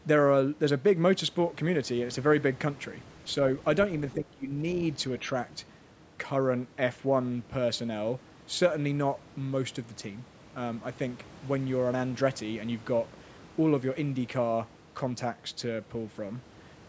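From 4.15 to 4.57 s the speech dips by about 15 dB, likely speech suppressed in double talk, with the echo canceller treating it as loudspeaker echo.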